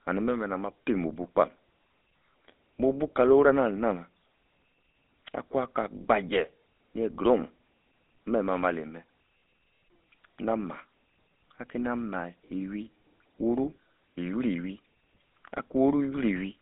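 A speech clip that's been through the GSM full-rate codec for its whole length, and the damage is plainly audible. The codec models the vocal tract and drives it with a sparse, regularly spaced pulse excitation, keeping only every third sample, which gives the voice that buzzy, gravelly grain. The line band runs roughly 200 Hz to 3.6 kHz, so it sounds thin and boxy, and the coarseness fits the 13 kbps full-rate scheme.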